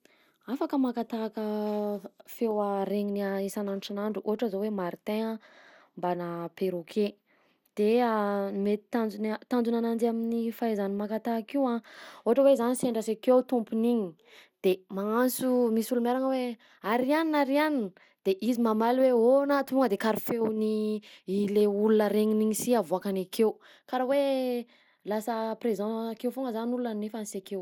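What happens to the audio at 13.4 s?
At 13.4 s the speech carries generation loss, as it does throughout the clip. The likely cause is repeated lossy coding: the audio appears to have passed through MP2 at 96 kbit/s about three times, each pass re-quantising on a shifted frame grid so the noise and spectral gaps accumulate. The result sounds swirly, smeared and hollow, worse than that bitrate alone would explain, with blurred attacks and nothing above 20.8 kHz.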